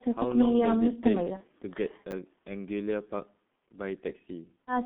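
From start to finish the speech sounds muffled and hoarse, with consonants smeared and nothing above roughly 3.5 kHz or below about 150 Hz. This is heavy G.723.1 codec damage. The codec works in 30 ms frames and models the voice coarsely and slowly, and the dull, rasping quality fits its low rate of about 6.3 kbit/s. Fine detail the model cannot follow is simply lost, which leaves that flat, telephone-line character throughout.

From 1.37 to 1.44 s the sound briefly stretches into a fading tone or coloured noise and then takes a moment to recover its strength. This is VoIP packet loss concealed by the speech codec. The gap fits a single lost 30 ms frame. The decoder filled it by repeating its last pitch and filter settings at falling gain. Because each frame depends on the one before, the voice stays weakened for a short while after normal packets resume.

Between 2.11 and 2.13 s there is a brief jumbled flick, as if the sound stumbled over itself. 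This comes from chunks out of order. A 10 ms piece of audio arrived one chunk late and played after the piece that should have followed it. Nothing was dropped, but swapping the two creates hard joins at each boundary, and those joins cause the scrambled moment.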